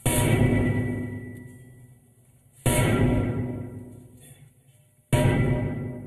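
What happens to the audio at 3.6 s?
At 3.6 s you're hearing channel delay (comb filtering), which runs through the whole clip. One channel lags the other by roughly a tenth of a millisecond, a few samples, so summing to mono cancels shared content at evenly spaced frequencies starting around 5 kHz, leaving the sound hollow and slightly dull.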